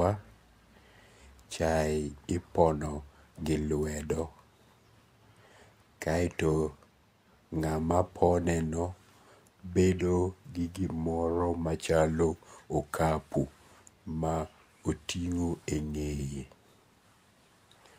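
A corrupt frame decoded at 9.99 s: a single compressed frame of the speech arrived with flipped bits, and the decoder played it anyway, so misread codes and gains scattered energy to the wrong frequencies. It sounds like a brief chirp, squeak, blip or burst of noise, with the error peaking around -30 dBFS.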